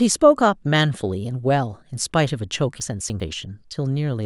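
From 2.8 to 3.2 s the speech turns briefly jumbled: chunks out of order. One 100 ms chunk arrived three chunks late and plays after them, so the material is all present but misordered. There are three hard joins, and on a waveform or spectrogram they appear as abrupt vertical discontinuities.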